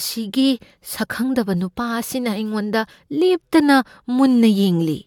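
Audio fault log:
No faults heard anywhere in the speech.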